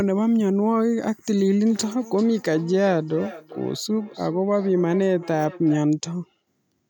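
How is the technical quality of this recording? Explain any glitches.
Feedback echo between two devices runs from 1.62 to 5.87 s. Two devices in the same room share a call, so one replays what the other's microphone sent, and that microphone picks it up again. Neither device's echo canceller can remove sound the other device played. The speech returns at roughly 0.4 s intervals, thinner and more ringing than the original, with the echo peaking about 18 dB below the speech.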